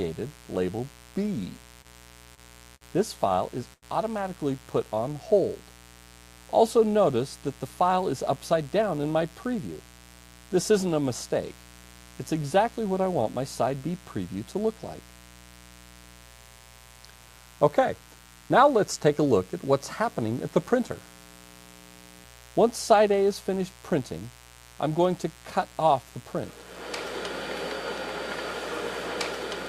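A mains buzz runs through the whole clip, a steady, raspy hum at about 25 dB below the signal. Sharp switching spikes twice per 60 Hz cycle, from a dimmer, rectifier or missing shield, stack up harmonics of 60 Hz that reach well into the kilohertz range. On a spectrogram it shows as an unbroken comb of evenly spaced horizontal lines. The waveform carries a fine, regular ripple underneath everything, even in the quietest passages.

Between 1.81 and 3.84 s there are four short stalls from late packets, at 1.81, 2.34, 2.75 and 3.73 s. Each time the jitter buffer ran dry, so the receiver held the last sound for about 30, 29, 60 and 90 ms until the packet turned up, then carried on without losing anything. Each stall is heard as a sound hanging on too long, with a faint buzz or dip. A spectrogram shows these as brief frozen stretches where the spectrum stops changing, and the waveform shows a small repeated cycle.

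From 7.64 to 9.68 s a jitter buffer speed-up drains the backlog. The receiver cut out many short slices, each one or a few pitch periods long, removing about a tenth of a second in total. The audio plays at about 106% speed with its pitch unchanged, so it sounds slightly hurried. On a spectrogram, events crowd closer together in time while their frequencies stay put.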